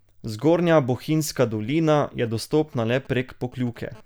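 From 2.26 to 3.78 s, just after "bohinjska dolina je", a galloping dit-dit-dit of brief 217 Hz buzzes runs well beneath the speech. These are GSM signalling bursts: a nearby 2G phone sending short radio bursts while signalling, which the audio circuitry rectifies.

At 3.95 to 4.01 s a hard, raspy buzz at 217 Hz, rich in harmonics and about 25 dB below the speech, cuts in briefly. This GSM phone buzz comes from the phone transmitting in bursts 217 times a second as in a call, its pulses rectified into audio.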